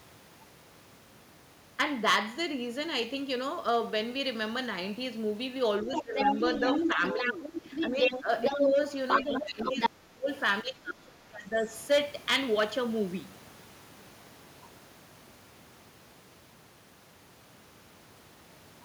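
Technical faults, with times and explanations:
5.83–6.35 s, 6.83–8.78 s, 9.22–10.29 s and 10.62–11.69 s, speech suppressed in double talk: the speech dips by roughly 10 to 25 dB in chunks while the far side talks, likely from an echo canceller ducking both. On a spectrogram, energy and upper harmonics thin out; the waveform shows notched, sagging envelopes.
5.93–8.72 s and 9.08–9.89 s, other side's voice leaking through: a second voice sits in the recording, around the talker's level at first, then somewhat louder, likely residual loudspeaker echo the canceller missed. A spectrogram shows overlapping, interleaved harmonic stacks; the waveform looks dense.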